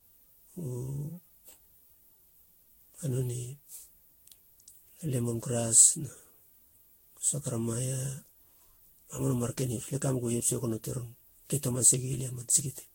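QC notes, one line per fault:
Throughout: generation loss. The speech sounds swirly, smeared and hollow, beyond what a single lossy encode at this quality would give. Consonant attacks are blurred. There is nothing above 16.6 kHz. The likely cause is around ten passes through the Vorbis codec, which fits rates near 60 kbit/s. Each pass quantised again on a shifted frame grid. Noise and spectral holes piled up with every pass instead of staying fixed.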